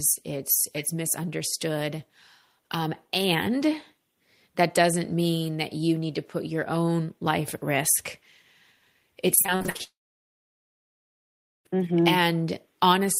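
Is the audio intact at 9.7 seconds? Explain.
No. From 9.35 to 9.81 s there is repeated packet loss (robotic sound): nine short gaps, the longest 51 ms, each patched by stretching the preceding sound, so nearly half the span is filled-in audio. The rapid string of brief holes gives a choppy texture with pieces missing, unlike a single dropout's one clean silence.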